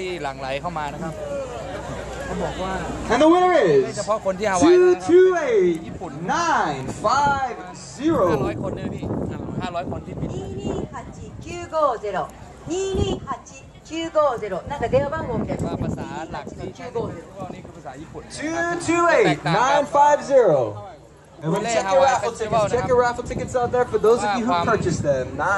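No technical fault can be heard at any point in the audio, and the signal stays intact and steady throughout.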